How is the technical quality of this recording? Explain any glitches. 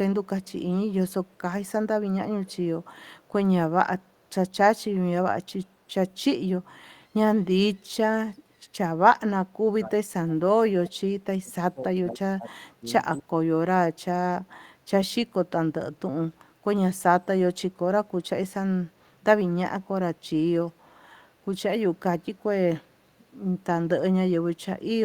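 The recording has two call-processing faults: a faint echo early on, and several passages where the talker's level is pushed down.

Echo leak, at 0.42, 1.09–1.41, 2.45–2.56 and 2.83–3.28 s: a faint delayed copy of the speech trails it by 252 ms, about 35 to 40 dB down. It is likely a far-end canceller letting loudspeaker pickup through. The fixed, discrete delay sets it apart from room reverberation.

Speech suppressed in double talk, at 9.48–10.6, 10.87–10.97, 11.42–12.86 and 13.19–13.41 s: the speech sinks by roughly 20 to 30 dB while the other side talks, likely because the echo canceller mistook the talker for echo. The level dips rather than dropping to digital silence, which separates it from packet loss.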